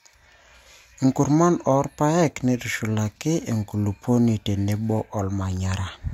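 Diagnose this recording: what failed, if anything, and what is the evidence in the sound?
The fault sits in the sample-rate conversion stage: the resampler restarted on every block. From 2.18 s to 5.86 s the speech carries a 50 Hz buzz, a steady train of small ticks that follows the signal. The ticks come every 20 ms, one at each block edge. Because each block is converted in isolation, the filter lacks the true neighbouring samples at its edges, leaving a small error at every boundary. This fits a 44.1 kHz to 48 kHz conversion done block by block.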